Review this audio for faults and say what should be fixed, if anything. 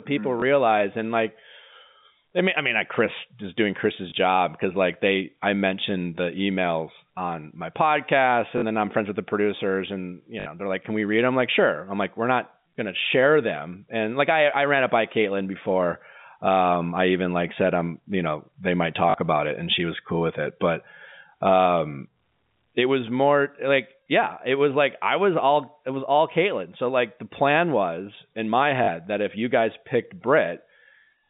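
Packet loss with last packet repeated: packets went missing and the receiver replayed the previous one until new audio arrived. This happens at 0.4, 4.1, 8.58 (after "emails on my podcast"), 10.4, 19.1 (after "you know they might") and 28.84 s. Each gap lasts 20 to 60 ms, which fits 20 ms packets, and leaves a small blip where one packet was lost or a short, buzzing robotic stutter where several were. Adding forward error correction and a jitter buffer with proper loss concealment would prevent these stutters.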